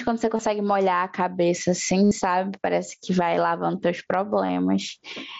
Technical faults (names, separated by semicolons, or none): gain pumping; concealed Bluetooth headset packet loss